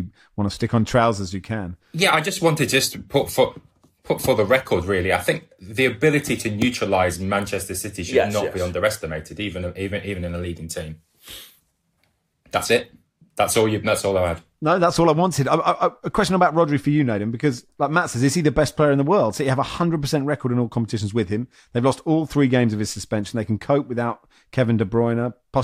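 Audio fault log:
No faults detected in playback.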